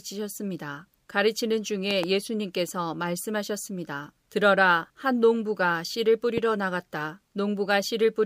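At 1.91 to 2.06 s a loud pop arrives as two sharp thumps in quick succession, and at 6.38 to 6.40 s a single one follows, each roughly 15 dB above the speech, which carries on underneath. The likely cause is a sudden voltage step from a plug, switch or static discharge entering the signal path. On a waveform each shows as a tall spike towering over the speech, and on a spectrogram as a thin vertical stripe spanning all frequencies.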